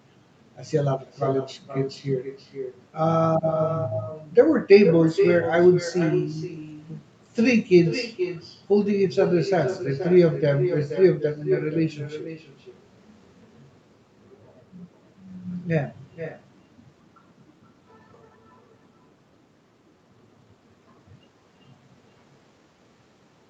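Echo with no canceller, throughout: the far end's loudspeaker leaks into its microphone, so speech returns half a second later, about 9 dB quieter, thinner.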